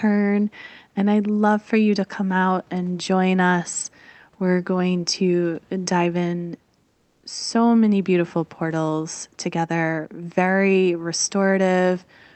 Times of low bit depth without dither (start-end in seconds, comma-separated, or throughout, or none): none